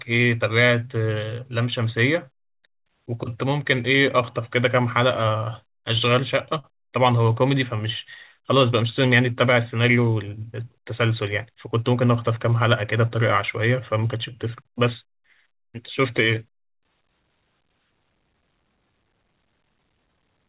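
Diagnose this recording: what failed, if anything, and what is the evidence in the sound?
The network stage let packets arrive late, so the jitter buffer ran dry five times between 5.96 and 6.66 s and the receiver stretched out the last sound, 76 ms in total, the longest hold 44 ms. Nothing drops out, but this repeated stalls (stutter) makes the speech drag and hiccup, heard through the 4 kHz-limited band of the call path.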